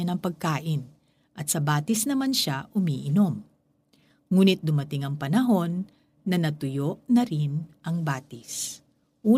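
No technical faults can be heard anywhere in the recording, and the speech signal stays continuous and intact throughout.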